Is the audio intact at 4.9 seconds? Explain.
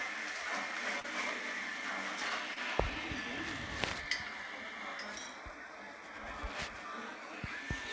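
Yes, the audio is intact at 4.9 seconds, with no dropout, click or other fault at that moment, only the steady band limit of the call codec, which leaves nothing above 8 kHz throughout.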